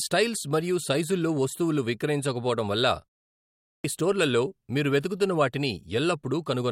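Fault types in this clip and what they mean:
Clipped start after a pause: Right after "సైజుల్లో వస్తువులు విక్రయించకపోవడం వల్ల" there's a short gap of about 0.45 s, and the playback side seems to drop into an idle state during it. When the sound comes back, the output hasn't caught up, so roughly 0.39 s gets swallowed between 3.45 and 3.84 s. The audio then jumps in abruptly at "స్టోర్లలో మీరు వెతుకుతున్న", missing its opening instead of building up naturally.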